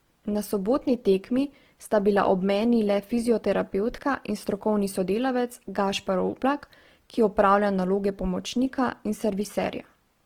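Throughout the speech, the audio was likely squeezed through Opus compression in its music mode at a rate fitting about 16 kbps. Short of bits, bands get filled with folded or noise content, so the voice turns rough and grainy, though the bandwidth still reaches 20.2 kHz.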